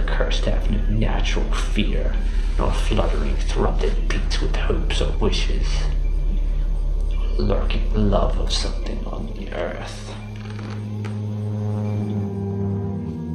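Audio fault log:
3.65 s and 5.13 s, compressed frames skipped: whole blocks of compressed audio never reached the output, either missing from the stream or rejected by the decoder as corrupt, so playback jumps forward by about 100 ms at the first point and about 70 ms at the second, which fits roughly five and three frames of 23.2 ms. Overlapping neighbour frames smear each join into a short blurred blip, not a sharp click.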